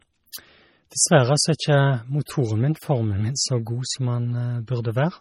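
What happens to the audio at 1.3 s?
At 1.3 s you're hearing the same heavy MP3 compression that runs through the whole clip. The speech sounds watery and swirly, with the treble cut off above 18.2 kHz. That's likely an encoder short of bits, fitting a low bitrate around 32 kbps, zeroing weak frequency lines so they flicker frame to frame.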